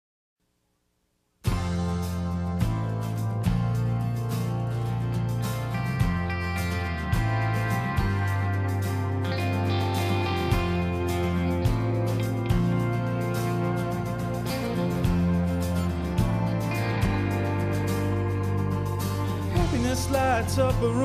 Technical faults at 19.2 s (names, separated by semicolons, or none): none